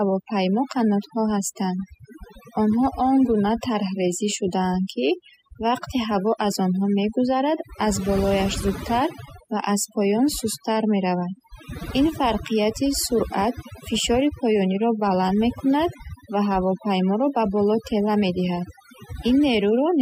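Overdone noise removal runs through the whole recording. The noise reduction was set too aggressively, cutting individual frequency bands close to its noise estimate and taking the quieter parts of the speech with them. The background drops and breaks up into twinkling specks.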